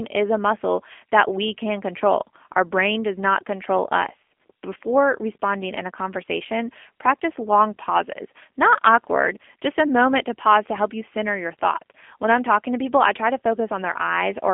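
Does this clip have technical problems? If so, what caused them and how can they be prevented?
Yes. G.729 coding throughout the speech: the low-rate model rebuilds each frame from a vocal tract filter, pitch predictor and sparse pulses, giving plainly audible roughness and a synthetic edge, consistent with about 8 kbit/s. The band runs from 250 Hz to 3.4 kHz, with nothing above 3.6 kHz. Preventing it means routing the call through a wideband codec such as Opus or G.722 instead of G.729.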